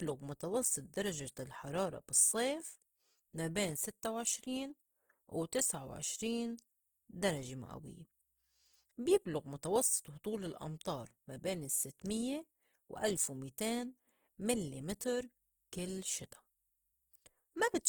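Throughout the speech, Opus compression is plainly audible as a rough, grainy, noisy texture. The likely cause is CELT coding at a rate that fits about 16 kbps, filling bands with folded or noise-like content. A spectrogram shows energy reaching 20.1 kHz with few holes, but speckled, smeared harmonics.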